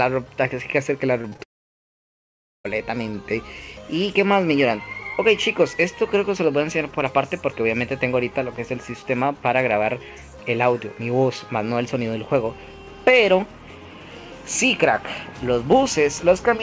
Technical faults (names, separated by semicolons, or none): repeated packet loss (robotic sound); long network dropout